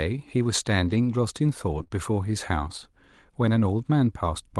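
At 0.85 to 0.99 s, and again at 1.71 to 1.81 s, there's a lost packet rebuilt from error correction. Packets went missing, but the following ones carried low-bitrate copies, so there's no gap. Those stretches, about 80 ms and 60 ms, just sound rougher and noisier. That fits a handful of 20 ms packets each time.

Right after, at 1.83 to 1.88 s and 1.88 to 1.91 s, come two back-to-back short concealed packet losses. About 20 ms each never arrived, and the decoder extended the previous sound to cover them. The result is a quick smear or wobble before things blend back in. All of this sits on an Opus call path that sounds limited to about 12 kHz.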